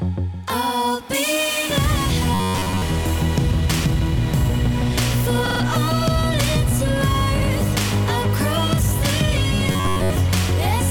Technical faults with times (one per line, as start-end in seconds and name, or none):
2.34-2.82 robotic sound from repeated short buffers
5.46-5.60 repeated frames
7.41-7.50 repeated frames
9.67-10.10 robotic sound from repeated short buffers